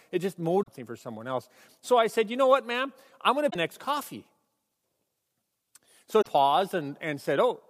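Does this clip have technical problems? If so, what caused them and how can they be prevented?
Yes. Damaged data in a compressed stream at 0.59–0.69 s (after "it just"), 3.46–3.56 s and 6.18–6.27 s: corrupted frames make the decoder lose sync, giving brief glitches. Prevention: transfer and store files with checksums or error-protected containers, and keep metadata out of the audio payload.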